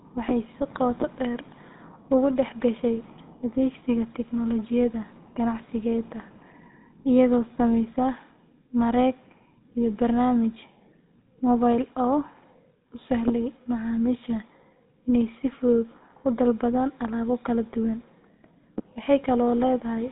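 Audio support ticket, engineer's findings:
GSM full-rate codec throughout speech: buzzy, gravelly roughness, nothing above 3.9 kHz, fits a 13 kbps rate. Spectrogram shows hard ceiling there, coarse pulsed excitation smearing harmonics.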